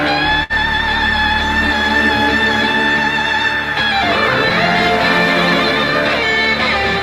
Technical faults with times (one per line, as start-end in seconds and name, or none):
0.43-0.53 short stall from a late packet